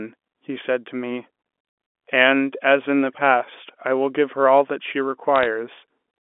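A speech recording carried over a G.711 telephone channel, band-limited to roughly 250 Hz to 3.5 kHz, carries a short burst of bit errors on a digital phone line from about 5.36 to 5.46 s. A few tenths of a percent of the transmitted bits were flipped there, and each flip corrupts a single sample, producing a cluster of sharp ticks layered over the speech. On a waveform these appear as isolated one-sample spikes, and on a spectrogram as thin vertical broadband streaks.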